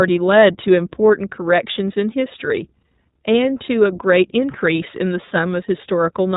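Throughout, the speech sounds muffled and boxy, with nothing above 4 kHz, and carries a plainly rough, slightly synthetic edge. This is iLBC codec damage: each 20 ms frame's excitation is coded independently at a low rate, which fits iLBC's 15.2 kbps mode.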